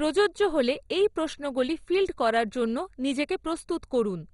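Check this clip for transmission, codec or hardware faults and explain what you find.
The speech runs through one codec fault for its whole length, and it's heavy: this is likely MP2 compression, MPEG Layer II at a low rate. There's nothing above about 11.2 kHz, so it sounds dull. The coder splits the signal into 32 sub-bands and, short of bits, shuts off the upper ones and quantises the rest coarsely. That's what gives the gurgling, grainy texture, and the flicker fits a budget around 56 kbps.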